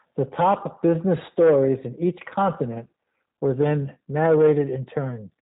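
From start to finish the speech sounds slightly rough and synthetic, with nothing above 3.8 kHz. This is G.729 codec damage, plainly audible: each 10 ms frame is rebuilt from a vocal tract filter, a pitch predictor and a few pulses, which fits an 8 kbit/s stream.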